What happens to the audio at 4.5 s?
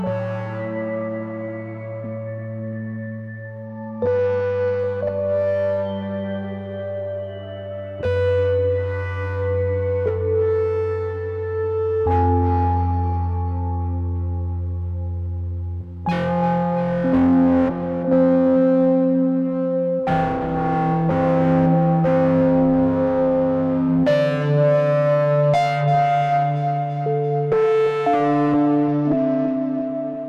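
At 4.5 s the audio is inside a Bluetooth SBC bit pool drop running from 3.66 to 4.80 s. Starved of bits, which fits a bit pool falling from 28 to 10 (around 84 kbps), the top sub-bands thin out and the rest are coarsely quantised, so treble dulls while gritty noise rises. Unlike a simple low-pass filter, it adds grit and recovers by itself.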